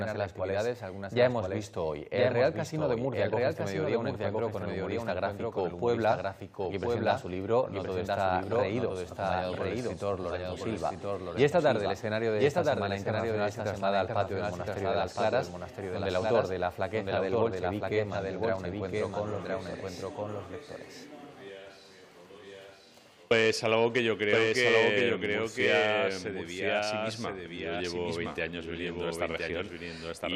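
Throughout, a doubled audio track: a full-band copy trails about a second behind, somewhat quieter, likely a second capture path. Unlike echo, it repeats once with no decay or room colour.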